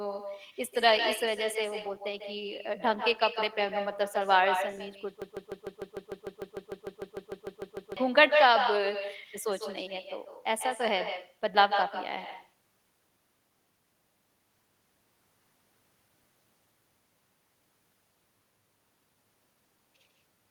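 Right from the start, the speech carries an echo with no canceller. A quieter, thinner copy trails everything said by roughly 150 ms, sitting only about 8 dB below the direct sound. Somewhere on the far end, a loudspeaker is feeding the call back into a microphone, and nothing is stripping that out before it returns to us across the network.

From 5.22 s to 7.97 s there's a broken-record loop. A 150 ms fragment repeats back to back, 18 times in a row, giving a stuttering, machine-gun effect for nearly three seconds. Whatever should have been heard in that stretch is simply gone. The likely cause is a player, encoder or stream that stalled and kept re-sending the last chunk it had buffered until it recovered.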